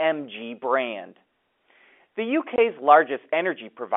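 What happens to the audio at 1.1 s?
Nothing goes wrong at 1.1 s: the speech carries on intact through that moment, with only the narrow band of the G.711 telephone line to be heard.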